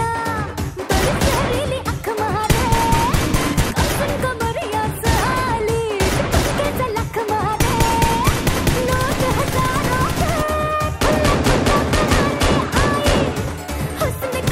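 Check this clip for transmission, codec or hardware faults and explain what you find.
Nothing audible points to a transmission, codec or hardware fault anywhere in the clip.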